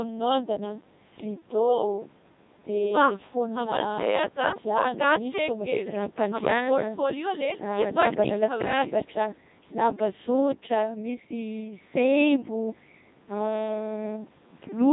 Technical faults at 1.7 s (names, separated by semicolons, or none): Codec 2 vocoder